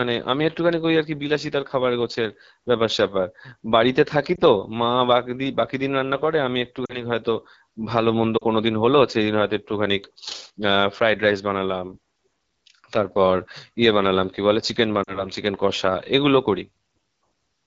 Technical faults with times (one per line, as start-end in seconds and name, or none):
0.00-17.66 AMR wideband (HD Voice) codec
4.35-4.40 lost AMR speech frames
6.86-7.04 lost AMR speech frames
8.38-8.43 lost AMR speech frames
15.03-15.27 lost AMR speech frames